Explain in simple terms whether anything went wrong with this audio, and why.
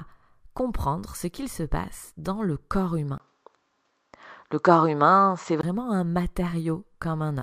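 At 3.18 seconds the sound abruptly turns duller and more boxed-in, and it stays that way until 5.63 seconds, when the fuller, clearer sound returns. A brief gap of about 20 milliseconds marks the first change. The likely cause is an input switched to a poorer device, meaning the recording jumped to a lesser microphone or headset partway through. That device cuts off everything above roughly 7.8 kHz, changes the loudness slightly, and adds a faint background noise of its own.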